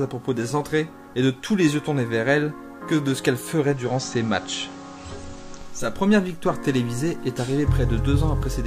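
At 3.55 s the audio shows digital radio blending to analogue: the receiver lost its digital stream and cross-faded over roughly 0.42 s to the station's FM broadcast. During the FM stretch a steady hiss sits roughly 30 dB below the signal, and the level shifts by about 1 dB. At 5.97 s the receiver blends back to digital, removing the hiss.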